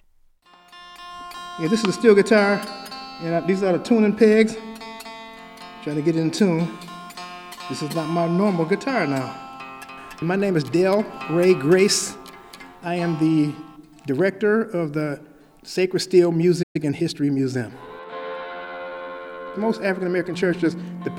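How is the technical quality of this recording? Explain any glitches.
There's one real hiccup, a stall with a short catch-up after it, and both land around the 17-second mark.

At 16.62 s the playback stall hits: the audio just drops out mid-flow for about 120 ms and then carries on. Most likely the player ran dry of buffered data or its output thread got held up briefly, so nothing was fed to the output until it recovered. You hear it as an abrupt hole in the sound.

Straight after, from 16.76 s to 17.94 s, you get time-compressed catch-up. The player eats into its backlog by snipping out tiny slices and cross-fading the joins, running at about 1.1 times normal speed. Pitch stays where it should, but that stretch feels a touch rushed before settling back to normal pace.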